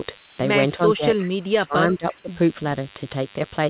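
A speech recording carried over a call line, with nothing above 4 kHz, which fits a G.711 telephone codec. A DECT cordless phone buzz runs through the whole clip. It is a thin, steady buzz at 100 Hz with a dense stack of harmonics, sitting around 20 dB below the speech. A nearby DECT handset or base fires a radio burst every 10 ms. The audio circuitry rectifies those bursts into sound. From 0.18 to 0.38 s, comfort noise replaces the background. For those 200 ms the real room tone disappears. A flat, featureless hiss fills the gap instead, about 3 dB quieter. The background there sits about 33 dB below the loud speech. The likely cause is discontinuous transmission. The sender stopped sending during the pause, and the receiver generated a noise estimate to cover it. Speech is suppressed in double talk three times. From 0.96 to 1.26 s the voice dips by around 10 dB. From 1.48 to 1.76 s it sinks much deeper, by roughly 25 dB. 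From 1.94 to 2.30 s it falls by around 20 dB. The likely cause is an echo canceller that could not tell this talker from the far end's echo while both spoke. It turned both the talker and the echo down.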